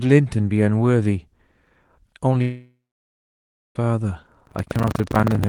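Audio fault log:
2.41–3.77 s: long network dropout, likely; a fading buzz continues the last sound, then about a second of silence, and audio resumes with roughly 1.34 s missing, unlike a brief glitch.
4.44–5.48 s: buffer tearing; a steady 25 Hz robotic rattle appears only with signal, as a small slice of each period replays audio about a tenth of a second old.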